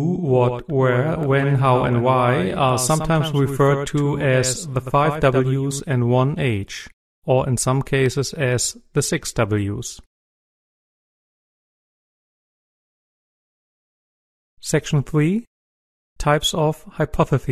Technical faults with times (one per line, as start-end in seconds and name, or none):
0.00-5.80 doubled audio track